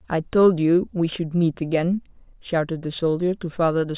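No technical faults can be heard anywhere in it.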